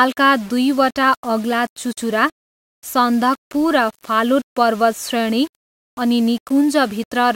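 Low bit depth without dither runs through the whole clip. The speech sounds grainy, and the grit changes as the level moves. Quiet passages turn rough. The likely cause is rounding to a 6-bit level without dither, leaving error only about 25 dB below the speech.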